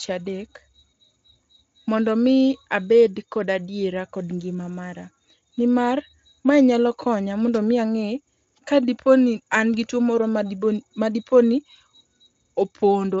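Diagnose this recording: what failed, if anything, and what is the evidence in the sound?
Nothing failed in this recording, and the sound gives no evidence of a fault; the Speex coding at 34 kbps, with nothing above about 7.7 kHz, leaves at most faint traces.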